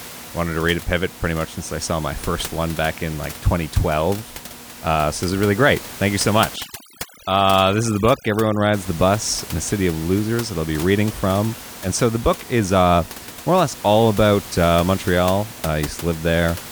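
From 6.56 to 8.74 s, overdone noise removal takes hold of the speech. A noise reduction stage is working far too hard here. It pushes single frequency bands down or shuts them off whenever they sit near its noise estimate. Quiet parts of the voice get caught as well. The pauses drop to near silence with twinkling specks. The room noise elsewhere sits about 16 dB below the speech.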